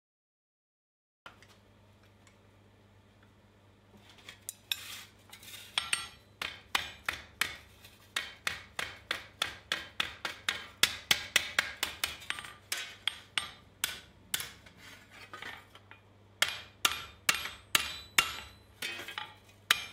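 From 0 to 1.26 s there is pure digital silence, and at 1.26 s the sound begins abruptly, already in progress. This is a cut-off start: capture or the stream started late, so the opening of the sound was never recorded and there is no natural attack or fade-in. On a waveform, a flat silent line jumps straight to the signal. On a spectrogram, a blank region ends in a hard vertical edge where energy appears at once across the band.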